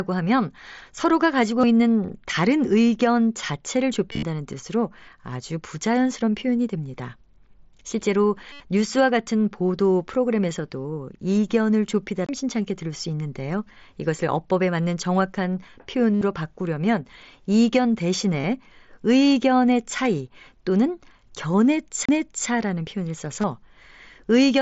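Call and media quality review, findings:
Bluetooth headset link dropping voice packets, concealed Bluetooth headset packet loss at the receiver. Lost audio is patched by repeating the closest-matching stretch of the last ~20 ms. Brief losses at 1.61–1.63 s, 18.42–18.44 s and 23.41–23.44 s, each 22.5 ms, are nearly hidden. Longer losses produce a buzzy held tone at full level with a slight warble on recovery: 8.52–8.60 s (75 ms) and 16.15–16.22 s (67.5 ms). At 4.11–4.23 s, 97.5 ms is lost in scattered gaps over 120 ms, longest run 37.5 ms. The lost amounts fit multiples of a 7.5 ms mSBC frame. The mSBC headset codec adds light grain on loud sounds.

CD skip: the disc source lost tracking and the laser jumped to another turn of the spiral. The playback path mutes briefly, then resumes from a different point. Heard as a tick with a short dropout, about 20 ms at 12.26–12.29 s and about 30 ms at 22.05–22.09 s. 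In each case the sound continues abruptly out of sequence, displaced by a whole number of disc revolutions.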